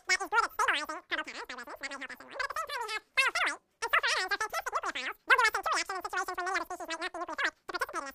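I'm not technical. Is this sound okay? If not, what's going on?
No. The audio is being played back three times faster than it was recorded, a wrong sample rate fault, which fits a 16 kHz recording played at 48 kHz. Throughout, everything rushes by at triple speed and sounds squeaky, about 19 semitones too high.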